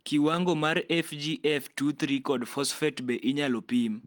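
No technical faults can be heard anywhere in the recording.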